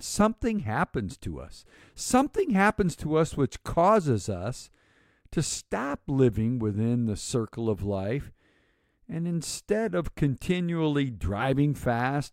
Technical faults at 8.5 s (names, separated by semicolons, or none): none